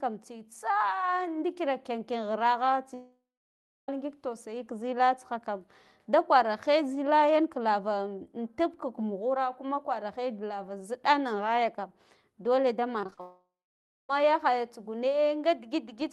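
Speech over a call link, with two kinds of network fault. From 2.94 to 3.89 s and again from 13.21 to 14.10 s, the sound fades into a brief buzz and then about 0.6 s of silence, most likely a long network dropout. Unlike choppiness, each is a single long hole. Just before the second, from 13.01 to 13.20 s, six short gaps of up to 35 ms are patched in turn, making the sound choppy and robotic. That is repeated packet loss.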